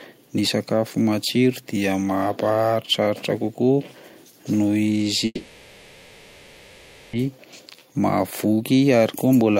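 A speech recording in which, from 5.25 to 7.15 s, the sound stalls into a fading buzz or hiss for nearly 1.9 s and then resumes with nothing lost, a call audio freeze, likely from delayed packets emptying the jitter buffer. From 7.31 to 7.67 s the speech hurries at 115% speed without changing pitch, a jitter buffer speed-up trimming roughly 70 ms of pitch periods to shed the built-up delay. Right after, from 7.76 to 7.98 s, it drags at 83% speed, a jitter buffer slow-down that repeats pitch periods to add 47 ms of reserve.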